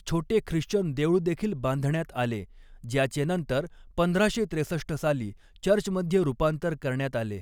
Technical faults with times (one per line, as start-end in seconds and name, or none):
none